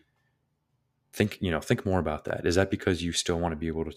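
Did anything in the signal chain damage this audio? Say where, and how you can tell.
Yes, a repeated buffer at the driver or buffer stage. At 1.07 to 1.13 s, one 21 ms slice sounds four times with hard joins, a stutter. At 2.28 to 2.30 s, one slice repeats once. Late data made the device replay its last block, which fits a 1024-sample buffer.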